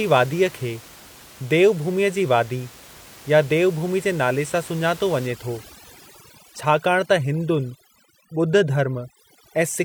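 Overdone noise removal runs from 5.27 s to the end. The reduction is set so hard that bands near the room noise, about 22 dB below the speech, get cut away along with quiet speech detail, leaving twinkling specks.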